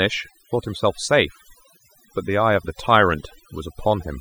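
Overdone noise removal runs through the whole speech clip. A noise reduction stage was set too hard. It cuts individual frequency bands whenever they sit near its noise estimate. Quiet parts of the voice vanish with them. Gaps fall to near silence with twinkling specks.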